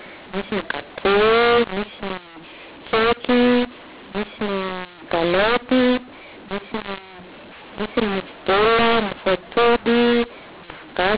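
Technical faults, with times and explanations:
Throughout: mu-law and A-law mixed up. The speech was coded as G.711 mu-law and then decoded as if it were A-law. Because the two laws map the same 8-bit codes to different levels, every sample is read back at the wrong size. Some come out too loud and others too quiet, and the quietest samples are pushed well above silence. That gives the speech a harsh, distorted edge and fills the pauses with noise, while the narrow 4 kHz telephone band is still heard.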